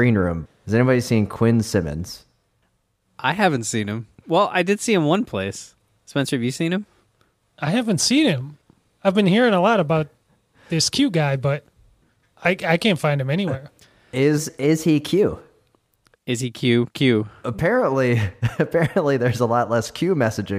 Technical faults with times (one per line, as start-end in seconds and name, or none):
14.38-15.76 wrong sample rate